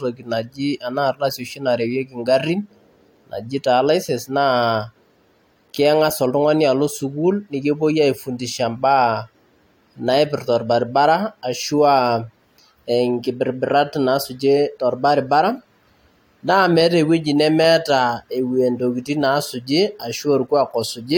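Nothing in this speech recording stands out as a technical fault, so there's nothing to flag here.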